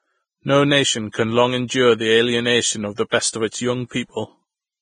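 The speech is band-limited throughout, with nothing above 9.7 kHz. Treble sounds hissy and grainy. This is likely heavy Vorbis compression at a low bitrate.

Pre-echo appears at 1.12 to 1.14 s and again at 2.96 to 2.98 s. Block quantisation noise leaks 22 ms ahead of sharp onsets, smearing each attack with a hiss.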